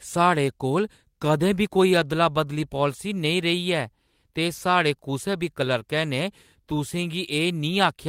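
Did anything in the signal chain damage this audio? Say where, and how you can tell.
No, nothing in the signal chain damaged this speech.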